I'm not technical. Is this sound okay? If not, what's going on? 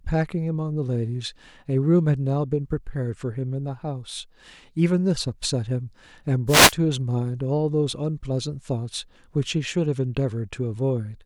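No. At 6.47 to 6.74 seconds there's a wireless microphone noise hit. The mic's radio signal briefly faded, so a short burst of static swished over the speech.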